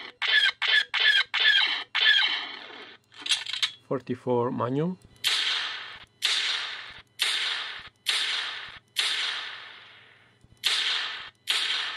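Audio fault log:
Nothing stood out on listening to this audio.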